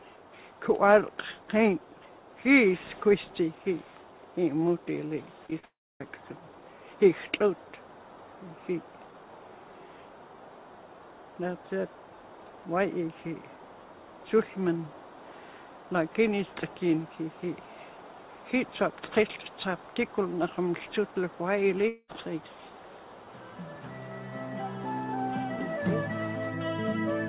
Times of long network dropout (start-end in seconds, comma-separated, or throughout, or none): 5.65-6.01, 21.88-22.10